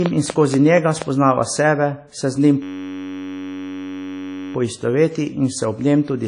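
Throughout the speech, plainly audible ringing, washy coding damage points to WMA compression, likely at a low bitrate around 32 kbps. A spectrogram shows a flat ceiling at 10.1 kHz.

From 0.06 to 1.03 s, a train of clicks ticks at a regular 4.2 per second, roughly five pulses about 15 dB above the speech. They are likely from interference or a faulty connection or supply, and show as thin vertical lines.

From 2.62 to 4.54 s, a system hang loop replays one 10.67 ms slice 180 times, fitting a 512-sample buffer. It sounds like a steady 93.8 Hz buzz. The waveform repeats identical cycles, and the spectrogram shows horizontal harmonic bands.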